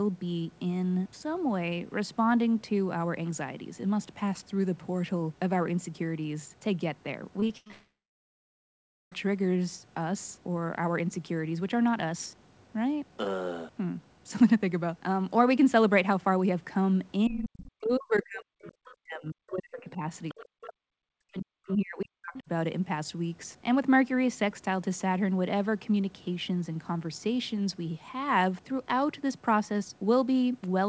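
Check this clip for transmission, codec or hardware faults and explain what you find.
The speech has network faults early on and echo-canceller faults in the 17 to 22.5 s region, all carried over a wideband call path whose 8 kHz ceiling fits G.722 at 64 kbps.

Repeated packet loss (robotic sound), 7.40 to 7.72 s: four short gaps, the longest 80 ms, are each filled by extending the previous audio. Nearly half of that span is synthetic, giving a choppy stutter with fragments missing.

A long network dropout follows from 7.72 to 9.13 s. The concealment buzzes briefly, then decays into about 1.2 s of silence before the signal resumes with roughly 1.4 s lost. An extended packet outage is the likely cause.

Speech suppressed in double talk occurs from 17.28 to 20.03 s, 20.33 to 20.82 s and 21.07 to 22.50 s. The talker dips by up to about 40 dB, likely because the echo canceller attenuated both directions while the far end was active.

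Other side's voice leaking through appears at 17.65 to 17.71 s, 18.63 to 18.95 s, 20.29 to 20.46 s and 22.35 to 22.39 s. Faint scraps sit about 15 to 30 dB below the talker, likely far-end loudspeaker echo left behind by incomplete cancellation.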